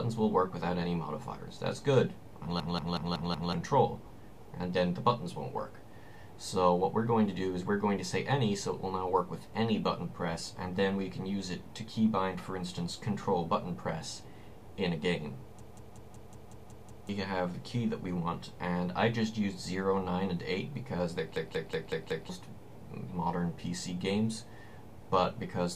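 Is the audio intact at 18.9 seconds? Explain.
Yes, the audio is intact at 18.9 seconds, with no dropout, click, distortion or other fault audible at that point.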